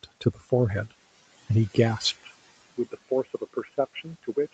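Throughout the recording, noise suppressor artifacts are present. The suppressor treats steady background as noise and pulls those bands down frame by frame, by about 16 dB. The room noise, which sits about 20 dB under the speech, therefore dips in the gaps and swells back under each phrase.

From 0.03 to 0.51 s, the noise suppressor cuts speech. It misreads quieter parts of the opening as noise and turns them down along with the background, by up to about 16 dB at the deepest point. Only around a fifth of a second within that span is affected. Those moments sound swallowed or faint, as if the edges of the sound were clipped away.

At 2.14 s, the input switches to a poorer device, most likely another microphone or a headset call profile, and it stays on it to the end. Before the switch the band reaches 8 kHz, as expected from call microphone processing. After it, the device passes a narrower band, so the sound turns abruptly dull and boxy. 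The change happens without any gap of silence, the level falls by roughly 5 dB, and a faint new noise floor appears far below the signal.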